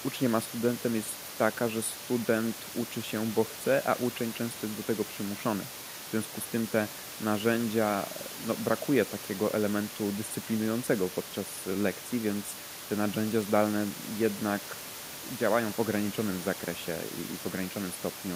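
Nothing here counts as a technical fault; there's just some ordinary room noise sitting about 16 dB below the speech, which comes from the recording space rather than the system.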